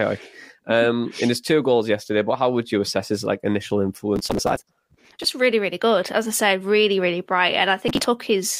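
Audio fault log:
4.16–5.28 s and 7.88–8.06 s, processor overload crackle. The processor misses many deadlines for short buffers of around 5 ms. Each miss skips audio, leaving a hard-edged gap. Together the gaps make gritty crackle over the speech, stopping when the load passes.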